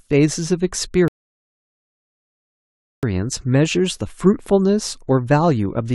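At 1.08 s the speech drops to silence until 3.03 s, then resumes exactly where it stopped: a rebuffering stall, the player waiting for data, adding about 1.95 s.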